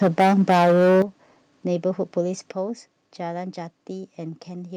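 Right from the start of this speech clip there's microphone overload: from 0.02 to 1.02 s the peaks are flattened hard against the converter's ceiling, running about 12 dB past it with something like a fifth of the samples squared off, so the loudest syllables come through with a gritty, crackly edge. That's likely the input volume just set far too high for how close or loud the talker is. You can also hear the microphone volume stepped down three times: a small drop of about 2 dB at 0.03 s, a big one of about 10 dB at 1.02 s, right as the distortion stops, and another of about 6 dB at 2.52 s. Each one is a sudden level change where the voice and the background fall together, with no fade, which points to likely automatic gain control in the call software reacting to the clipping and cutting the device's input gain in single jumps.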